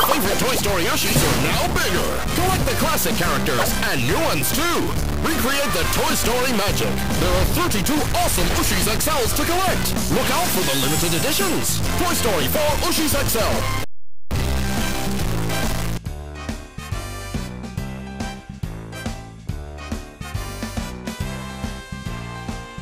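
From the start through about 15.97 s, the audio carries a harsh, buzzy distortion that rides along with the waveform, and the quiet gaps don't go quiet but fill with a gritty noise floor. That's the signature of a stuck bit, likely from a bad data line or converter holding one bit fixed. Roughly half the samples get knocked off by a step somewhere around -20 dBFS, which is a fairly high bit, so the hiss in the pauses is pretty prominent.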